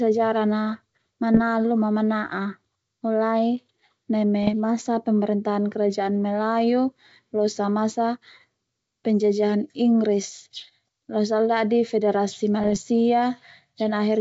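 Speech carried over G.722 wideband coding, consistent with the full 64 kbit/s mode, is hit by bit errors on an ADPCM link three times: 1.34 to 1.41 s, just before "ma mana'a mulai"; 4.43 to 4.55 s, just before "masa pemerintahan kerajaan"; and 12.61 to 12.77 s, just after "losa ala dadi federasi". Each burst sounds like pops and rough crackle with brief jumps in level. The flipped bits corrupt the decoder's step size and predictor, so each error rings on for some milliseconds instead of ending at once. On a waveform these show as jagged spikes and short level swings. On a spectrogram they appear as broadband vertical streaks across the band.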